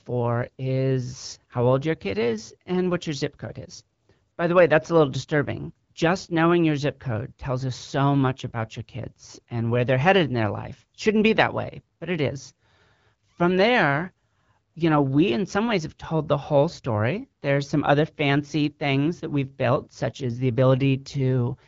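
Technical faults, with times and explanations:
No technical faults found; the speech carries through an AMR wideband (HD Voice) link at 12.65 kbit/s, with its top band from about 6.4 to 7 kHz filled in by the codec's shaped noise.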